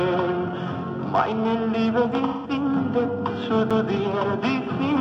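The clip has two separate faults. From 2.27 to 2.51 s there is AAC frame loss with concealment. The decoder has no data for a stretch of about 0.17 s, which fits four lost AAC frames, so it rebuilds the gap from the last good spectrum. The result is a smeared, noisy or phasey patch rather than a clean dropout. On a spectrogram this shows as a blurred block where the fine harmonic and transient detail of the surrounding audio gives way to a smooth, repeated spectral shape. At 3.70 s there is a CD skip. The laser jumps to a different turn of the disc's spiral, and the player mutes for a few milliseconds before carrying on from a new position. This is heard as a tick followed by an abrupt jump in the material. On the waveform it appears as a very brief flat gap with a hard discontinuity on either side, and on the spectrogram as a thin vertical broadband line.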